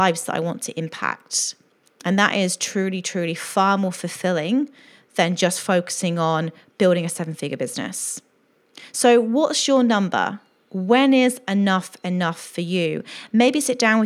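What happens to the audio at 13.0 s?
Nothing goes wrong at 13.0 s; the speech runs on intact through that moment.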